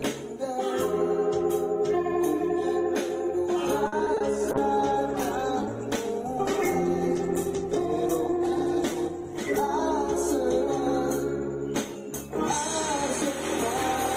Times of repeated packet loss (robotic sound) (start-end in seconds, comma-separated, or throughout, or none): 3.87-4.22